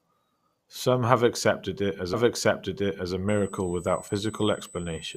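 A one-second stretch of this speech clip plays twice. Just after "have accepted it as", at 2.13 s, the audio jumps back with a faint blip and repeats that second before carrying on at 3.13 s. This is a stream segment repeated: the player fetched or queued the same chunk of the stream a second time, adding a full second of duplicated programme. Soon after, from 3.29 s, following "accepted it as a", a thin, steady high-pitched tone sits under the speech through to the end. It holds a fixed pitch at 8 kHz, roughly 20 dB below the speech. This is USB whine. The bus's 125-microsecond microframe activity draws current in regular pulses, and that ripple is leaking through the shared power or ground into the audio path, where it is heard as a constant 8 kHz tone.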